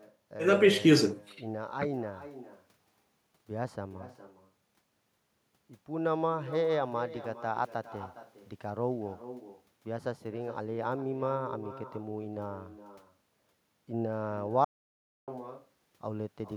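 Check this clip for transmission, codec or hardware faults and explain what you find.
Two faults are present: echo with no canceller, and an audio dropout to silence.

The echo runs through the whole recording. Each phrase returns roughly 0.4 s later as a fainter copy, about 13 dB below the direct speech. The far end is playing the call through a loudspeaker. Its microphone picks that sound up and sends it back across the network, and nothing cancels it. The returning copy sounds thin, trailing every utterance.

The dropout runs from 14.65 s to 15.28 s, so about 0.63 s of audio is missing. The sound stops abruptly and comes back just as abruptly. In between there is silence, with no room tone at all. The likely cause is that the input was briefly lost, through a disconnected device, a failed link or a mute, while the recorder kept writing silence.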